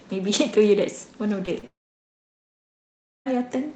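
At 1.45 s and again at 1.59 to 1.65 s, short concealed packet loss smears the sound for a few hundredths of a second, unlike a dropout, which would leave a gap. From 1.67 s a long network dropout likely causes a brief fading continuation and then about 1.5 s of silence until 3.28 s, with that stretch of audio lost rather than delayed.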